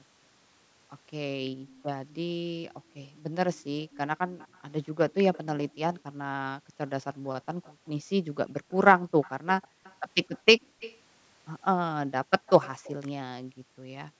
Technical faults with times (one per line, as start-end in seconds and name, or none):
1.50-3.35 background gated by the echo canceller
1.67-1.83 echo leak
3.90-7.72 echo leak
4.27-4.38 background gated by the echo canceller
6.02-10.80 background gated by the echo canceller
8.69-10.99 echo leak
12.46-12.93 echo leak
13.42-14.20 background gated by the echo canceller